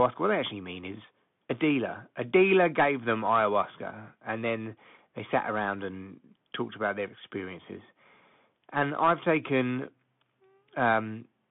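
Bluetooth CVSD headset codec damage runs through the whole of this speech clip and is plainly audible. The band is confined to roughly 150 Hz to 3.5 kHz, giving the thin, boxy narrowband sound that fits a 64 kbps CVSD link. Each sample is coded as a single up-or-down step whose size adapts, so loud high-frequency energy outruns the step: s sounds come out scratchy, and a granular hiss sits beneath the speech.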